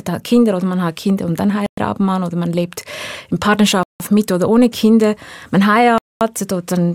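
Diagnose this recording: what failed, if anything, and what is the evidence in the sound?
The speech drops to full silence three times, at 1.66 to 1.78 s (111 ms), 3.83 to 4.00 s (168 ms) and 5.98 to 6.21 s (228 ms), then resumes. This points to a likely Bluetooth stall: delayed packets emptied the receiver's buffer, pausing playback until retransmissions arrived.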